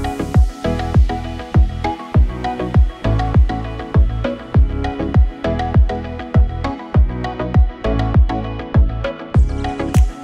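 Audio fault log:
No fault to log.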